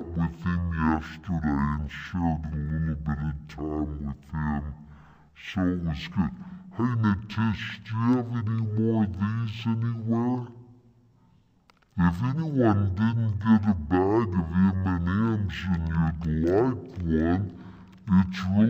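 Running the whole way through, it's stereo read as mono: interleaved left and right samples play back-to-back as one channel, so everything runs at half speed, an octave low.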